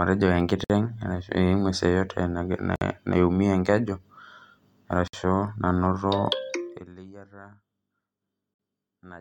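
Brief holes of silence, each about 55 ms, break into the continuous speech at 0.64 to 0.70 s, 2.76 to 2.81 s and 5.08 to 5.13 s. The speech stops with a smeared edge and resumes exactly where it left off. This is a gap at a join of encoded pieces: the speech was encoded in separate segments and spliced without trimming. The encoder's start-up delay and the padding in each segment's final frame remained as dead air at every joint.

From 6.58 to 6.95 s, a fine ticking buzz rides on the speech while its level falls by about 25 dB. This is zipper noise. The gain was lowered in discrete jumps, around two hundred a second, with no smoothing between them. Each jump leaves a tiny click, and together the clicks form a zipping texture for as long as the drop continues.

One more join gap of the same kind opens at 8.54 to 8.59 s, again about 55 ms long with smeared edges before the speech picks up again.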